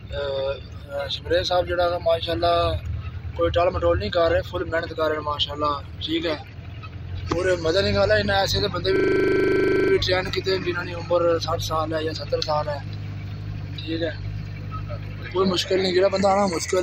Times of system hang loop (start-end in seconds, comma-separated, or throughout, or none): 8.96-9.92